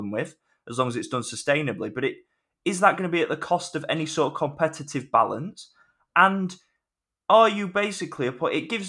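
No technical faults are audible.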